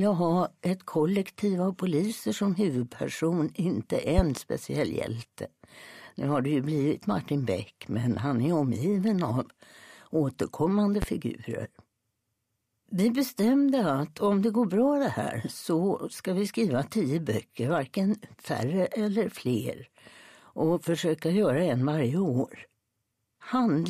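Loud pops occur twice: a pair of sharp pops between 4.18 and 4.40 s, then a single pop from 11.02 to 11.05 s, each peaking around 15 dB above the surrounding audio, which carries on underneath. The likely cause is a sudden voltage step or pulse, such as a plug being seated, a switch, static discharge or a driver glitch, entering the chain and being shaped by the circuits that follow into a brief, hard transient.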